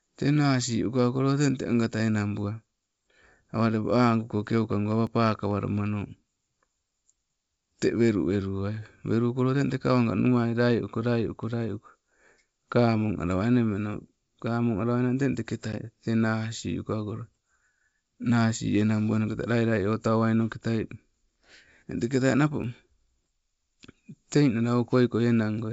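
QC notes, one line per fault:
5.07 s and 22.64 s, dropped buffer (overrun): each time the speech jumps ahead without any gap, around 5 ms missing at 5.07 s and closer to 15 ms at 22.64 s. This likely comes from the capture side failing to read its buffer before the hardware overwrote it, leaving the two sides spliced. On the waveform the trace changes shape abruptly with no flat stretch. The spectrogram shows a thin full-height vertical line where the discontinuity falls.
15.72 to 15.74 s, packet loss on an ADPCM call: a hard-edged hole of about 10 ms, which fits a single lost packet, replaced by silence. Because the decoder's adaptive step size and predictor fell out of step with the sender's, the speech comes back with some roughness before settling within a few tens of milliseconds. The waveform shows a flat gap with steep edges. The spectrogram shows a blank column across the G.722 band up to 7 kHz, then a smeared onset.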